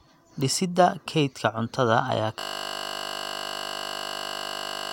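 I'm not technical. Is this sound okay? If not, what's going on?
No. A system hang loop starts at 2.40 s and lasts to the end: the computer froze while the sound hardware kept replaying the same 20 ms scrap of speech over and over, so the speech turns into a steady buzz repeating 50 times a second.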